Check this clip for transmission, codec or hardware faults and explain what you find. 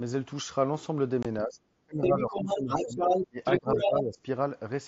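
Three kinds of fault are present in this speech, carried over a wideband mSBC Bluetooth headset link whose light graininess is audible.

Unconcealed Bluetooth headset packet loss, 1.23 to 1.25 s: a hard-edged 22.5 ms hole, consistent with three lost frames replaced by silence between headset and phone.

Speech suppressed in double talk, 1.44 to 3.01 s, 3.29 to 3.40 s and 3.59 to 4.20 s: the talker dips by around 25, 30 and 15 dB. The likely cause is the echo canceller ducking everything while both sides talk at once.

Other side's voice leaking through, 2.03 to 3.28 s and 3.44 to 3.91 s: a second voice is heard at roughly the talker's own level, likely loudspeaker echo that the canceller failed to remove from the microphone.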